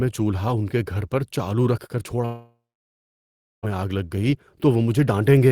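At 2.25 s the speech breaks off, and the last sound is stretched into a buzzy tail that fades within a few tenths of a second. About 1.05 s of silence follows, and the audio resumes at 3.65 s with "میں آگ". The material from this gap, about 1.38 s, is simply missing. The pattern is likely a long network dropout, with the receiver's concealment extending the final fragment before falling silent.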